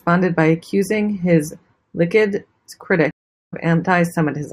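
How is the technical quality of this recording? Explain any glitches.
The recording has one glitch, a stream reconnect in the speech.

It runs from 3.11 to 3.54 s. The connection dropped, and the player fell silent while it reconnected. It then started a new decoder partway through the live stream. You hear a gap of 400 ms. The speech then picks up about a third of a second further on, so that stretch is skipped. The first moments after the gap come back muted or faded in as the fresh decoder starts.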